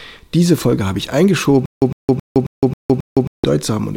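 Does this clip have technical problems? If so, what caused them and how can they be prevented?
Yes. From 1.66 to 3.44 s there is a stutter with silent gaps: an identical 106 ms burst returns every 270 ms with digital silence between. Plain dropouts don't repeat the same fragment like this. The likely cause is a stalled stream replaying its last fragment. Deeper playback buffering would prevent it.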